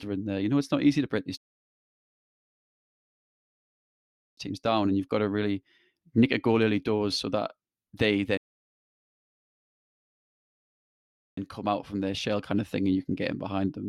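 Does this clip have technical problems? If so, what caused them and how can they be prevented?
Yes. Two rebuffering stalls cut the speech to silence, from 1.37 to 4.37 s and 8.37 to 11.37 s. Each adds 3 s. Playback resumes exactly where it stopped. A larger playback buffer or adaptive bitrate switching would prevent this.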